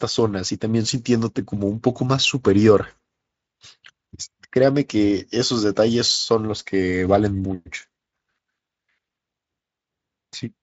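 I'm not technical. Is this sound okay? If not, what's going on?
Yes, this speech recording sounds fine, and there's nothing going wrong in it that you need to worry about.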